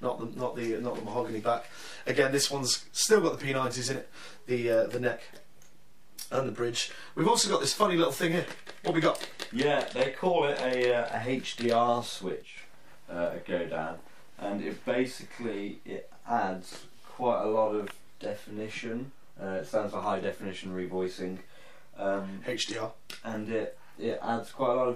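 From 12.42 to 12.57 s the level drops abruptly by about 6 dB, likely one channel dropping out before the mono sum, showing as a short rectangular notch in the waveform envelope.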